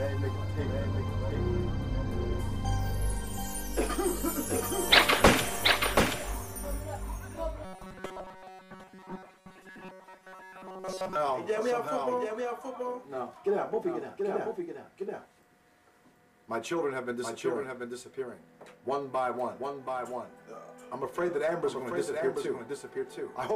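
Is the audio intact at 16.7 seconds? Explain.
No. At 16.7 seconds the sound is doubled, as it is for the whole clip. A second full-band copy trails the original by roughly 0.7 seconds, about 5 dB quieter. It has no decay or room colour, so it reads as a clean repeat rather than an echo. This is a doubled audio track. The likely cause is the signal being captured twice through a slower path, or an edit holding two copies out of step.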